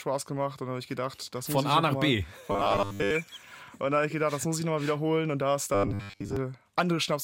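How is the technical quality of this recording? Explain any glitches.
Two glitches spoil it. From 2.52 to 3.11 s and again from 5.75 to 6.37 s there's robotic sound from repeated short buffers: a rigid 100 Hz metallic buzz, likely from the player looping its last 10 ms of audio over and over while most of the real audio is skipped.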